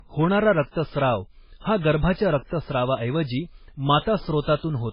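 Throughout the speech, the sound is dull and smeared, with nothing at all above about 5.2 kHz. That is low-bitrate audio saved at a high bitrate: the likely cause is a very low-bitrate MP3 re-encoded generously, which keeps the original cut-off and artefacts.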